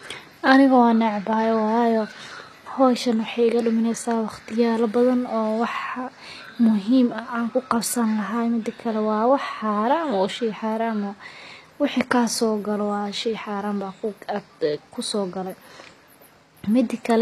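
From start to finish the speech has a treble that sounds bright but not quite real: the s sounds come out gritty and a bit lispy, and nothing at all gets through above 14.9 kHz. That's most likely HE-AAC compression at a low bitrate, something around 24 kbps by the sound of it. The codec keeps only the lower spectrum and fakes the top end by copying bands upward, so the rebuilt harmonics don't line up and the damage is plainly audible.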